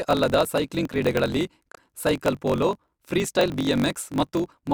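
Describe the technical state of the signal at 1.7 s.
Damaged data in a compressed stream occurs from 1.72 to 1.77 s, right after "ಅಲ್ಲದ ಸೈಕ್ಲಿಂಗ್ ಕ್ರೀಡೆಗಳಲ್ಲಿ". Corrupted bytes make the decoder misread those frames and lose sync while it hunts for the next valid header, producing a brief chirp or squawk in the speech.

Underneath, a block size mismatch (truncated) runs through this moment and the whole clip. One stage writes longer blocks than the next reads, which fits a 1024-sample read. Each block's tail is discarded, giving a 46.9 Hz buzz and speech running 1.12 times fast at near-normal pitch.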